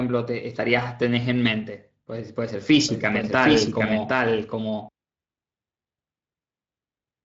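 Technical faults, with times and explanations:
2.89–4.89 s, doubled audio track: a second full-band copy of the speech runs roughly 0.7 s behind, about 5 dB quieter, with no decay or room colour, starting and stopping abruptly. It is likely captured twice over a slower parallel path.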